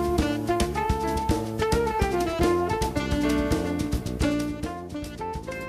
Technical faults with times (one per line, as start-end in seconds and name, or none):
none